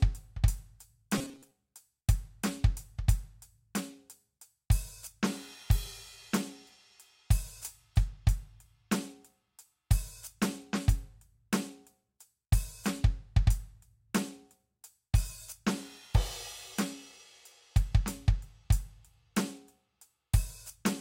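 Robotic sound from repeated short buffers, 1.18 to 1.52 s: the music collapses into a rigid, metallic buzz near 134 Hz. This is likely from a roughly 7.5 ms slice being replayed for most of that stretch while fresh audio arrived too slowly and was skipped.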